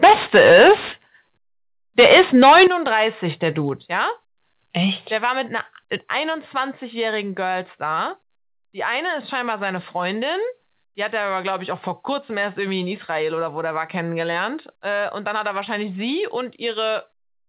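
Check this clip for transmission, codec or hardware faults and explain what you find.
Two problems show up early in the speech, both pointing to a hot microphone input. Everything sits below 4 kHz, which fits a G.711 A-law call path.

Microphone overload hits from 0.03 to 0.94 s and again from 1.98 to 2.67 s. The peaks run about 12 dB past the converter's limit and get flattened, roughly a third of samples in the first stretch and a fifth in the second. That gives the loud syllables a harsh, crackly edge, likely from input gain set too high.

Microphone volume stepped down happens four times: at 0.04 s by about 3 dB, at 2.67 s by about 11 dB, at 3.69 s by about 2 dB, and at 5.46 s, right after "war mit", by about 2 dB. Each is a sudden level drop in voice and background together. The big one lands right as the second overload ends, most likely the call software pulling the device gain down after clipping.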